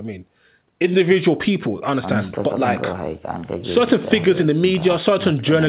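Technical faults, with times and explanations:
No faults to report here: the speech just has the narrow sound of an ordinary call, with nothing above about 4 kHz, which fits a normal G.711 phone-style codec path.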